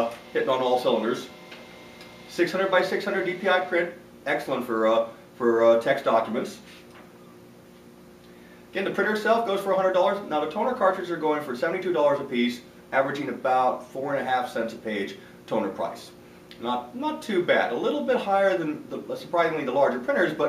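Nothing technically wrong turns up anywhere in this one, so there's no fault to point to here.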